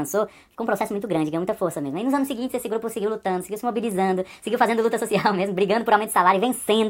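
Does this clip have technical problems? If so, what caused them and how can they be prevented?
Yes. A wrong sample rate affects the clip from start to finish. Everything runs about 1.38 times too fast and sounds roughly five and a half semitones too high. Speed and pitch are shifted together, which is the sign of this fault. The ratio fits audio captured at 32 kHz being played back at 44.1 kHz with no conversion. Prevent it by tagging files with their true rate and resampling whenever the playback rate differs.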